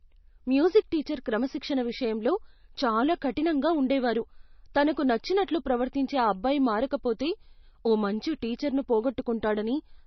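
Speech clip. Throughout, nothing is present above about 5.9 kHz, and the top end sounds dull and smeared. This is likely low-bitrate audio saved at a high bitrate: a heavily compressed MP3 re-encoded at a generous rate that cannot restore the lost detail.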